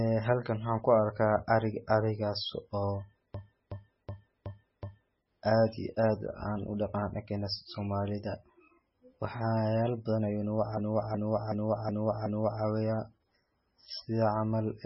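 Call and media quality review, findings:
Dull, watery speech throughout, nothing above 5.6 kHz, swirly smearing. Likely MP3 compression at a very low bitrate, near 17 kbps; encoder drops treble and weak bands.

Machine-gun stutter at 3.34–5.20 s, after "arka ariga arigas oo", before "aad iyo aad aan", and at 10.77–12.63 s, after "badan ayu nagu". A 0.37 s segment repeats five times at 2.69 Hz. System hang loop: output kept cycling a ring buffer that fits 16384 samples.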